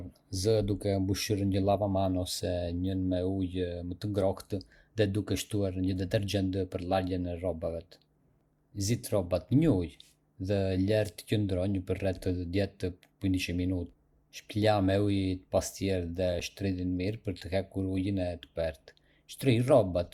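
Two separately encoded pieces of this speech recording were joined without trimming the encoder's start-up delay and final-frame padding, leaving a gap at a join of encoded pieces at 16.40 s. The leftover padding opens a hole of about 7.1 ms in otherwise continuous speech. It is brief enough to register as a small dropout rather than a pause, with its edges smeared by the codec. The speech then resumes exactly where it broke off.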